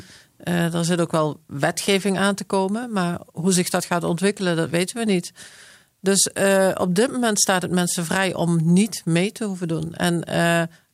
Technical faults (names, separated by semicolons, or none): none